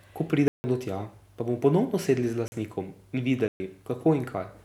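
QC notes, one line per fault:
0.48–0.64 s, block of digital silence: a 160 ms run of audio drops to silence just before "do tja pa", cutting out and back with no fade.
2.48–2.52 s, block of digital silence: a 40 ms hole, long enough to be heard as a short gap.
3.48–3.6 s, block of digital silence: a 120 ms hole with the same abrupt edges, likely from the output buffer not being filled in time. Unlike a concealed dropout or a fade, nothing bridges these gaps, and there is no taper into or out of them.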